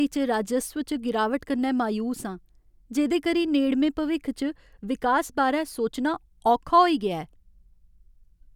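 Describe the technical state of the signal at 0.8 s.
At 0.8 s the speech signal is intact, with no audible technical fault at that moment.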